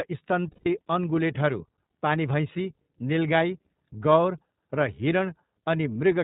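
Throughout, the speech carries the iLBC codec: nothing above 4 kHz, and a rough, slightly synthetic texture, which fits its 13.33 kbps, 30 ms frame mode. Wideband codecs would sound brighter, not duller. From 0.51 to 0.67 s, lost iLBC frames leave a held, buzzy vowel as the decoder repeats the last pitch cycle with noise, which fits five 30 ms frames. Unlike codecs that carry state between frames, it snaps back at once.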